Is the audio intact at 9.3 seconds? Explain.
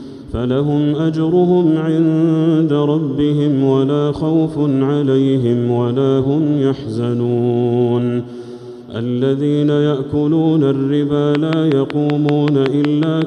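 Yes, at 9.3 seconds the audio is intact, with no dropout, click, distortion or other fault audible at that moment.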